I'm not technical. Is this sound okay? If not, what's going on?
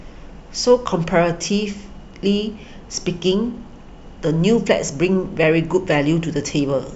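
Yes, this sound is okay, and nothing is going wrong in it.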